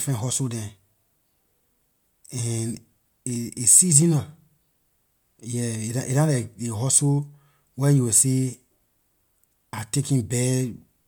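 A short stretch of speech, and there's nothing technically wrong to point to anywhere in it.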